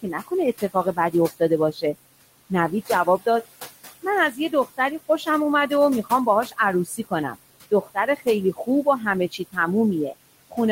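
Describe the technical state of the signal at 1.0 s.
At 1.0 s you're in the middle of a stretch, from 0.02 to 1.41 s, where the noise suppressor cuts into the speech. It mistakes some of the quieter speech energy for background and pulls it down with the noise, by about 13 dB at the deepest point. Altogether around a third of a second of the opening is hit, so soft consonants and word edges sound swallowed and faint rather than cleanly present.

On top of that, noise suppressor artifacts run through the whole clip, so they're present at 1.0 s too. The suppressor is taking about 19 dB off the bands it judges to be steady noise, frame by frame. The room noise, which sits about 16 dB below the speech, sinks in the gaps and rises back up under the speech.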